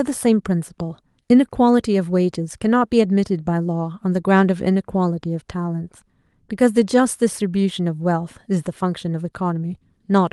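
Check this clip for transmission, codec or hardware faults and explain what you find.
No transmission, codec or hardware fault is audible anywhere in this speech recording.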